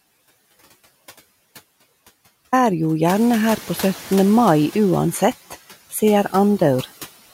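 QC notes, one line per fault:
0.00–2.53 s, audio dropout to silence: the clip opens already inside a gap of digital silence, with no room tone or residual noise, and sound only arrives at 2.53 s, starting abruptly mid-flow. Whatever was happening before that point is gone. The waveform is a dead-flat line, and the spectrogram is solid black across all frequencies until a hard vertical edge. This is most likely a lost input feeding zeros to the recorder.
3.07–4.31 s, noise suppressor catching up: the room noise jumps by about 12 dB at around 3 s, and the suppressor's noise estimate lags behind it. For about 1.24 s the noise comes through with only about 5 dB of reduction, noticeably louder and more present, then fades as the estimate adapts. On the spectrogram a broadband haze brightens sharply at 3.07 s and dims gradually toward 4.31 s. The waveform floor swells between phrases, then settles.
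Throughout, noise suppressor artifacts: the steady background is pulled down by about 13 dB, frame by frame and band by band. The residue drops away in pauses and rises back under speech. On the spectrogram the noise floor sinks between words. The waveform shows a floor that pumps in and out with speech activity.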